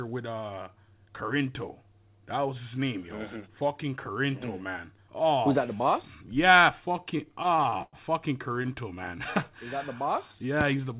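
From 6.86 to 7.96 s the speech drags and stutters, with sounds repeatedly held and faded. These are repeated stalls (stutter). Packets arrived late, so the jitter buffer emptied 16 times. About 258 ms was filled in (roughly a quarter of the span), the longest gap 104 ms, and nothing was lost.

At 8.63 to 8.67 s a single sound is held a touch too long. This is a short stall from a late packet. One packet missed its slot, so the receiver stretched the last sound by about 16 ms, then resumed where it left off.

From 9.50 to 10.82 s the speech runs slower at unchanged pitch, at about 94% speed, with sounds drawn out. This is a jitter buffer slow-down. To rebuild its reserve, the receiver repeated pitch periods and bits of pauses, adding about 90 ms. Through all of this the band stops at 4 kHz, which fits a G.711 mu-law call path.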